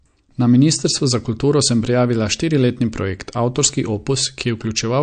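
The clip is speech, and the codec damage is plainly audible throughout. Nothing comes through above 9.1 kHz, and the quieter parts of the sound have the watery, swirling quality of spectral detail dropping in and out between frames. Consonant attacks are smeared. This points to likely MP3 compression at a low bitrate, consistent with roughly 48 kbps, where the encoder runs short of bits, discards weak frequency lines and applies a fixed treble cut-off. From 1.65 s to the end of the clip, sample clock jitter adds a rough, hiss-like error that tracks the signal. It is strongest where the waveform moves fastest, on loud and high-frequency content, and drops away in silence. The error sits around 30 dB below the signal, which fits timing uncertainty in the converter clock of a few microseconds RMS, with each sample taken slightly early or late.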